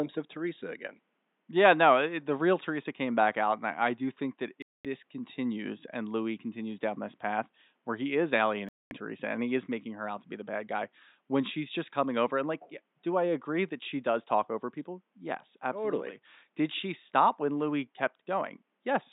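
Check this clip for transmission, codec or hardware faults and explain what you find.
There are two digital broadcast dropouts. The first runs from 4.62 to 4.85 s, between "I do think that" and "this continues and"; the second from 8.69 to 8.92 s, right after "path where he is". Each time the receiver stopped getting good frames and muted until clean data returned, so the speech just drops to silence for about 0.22 s. That's consistent with roughly seven lost frames, and whatever was said in that gap is gone. The faint room noise, about 50 dB below the speech, vanishes with it.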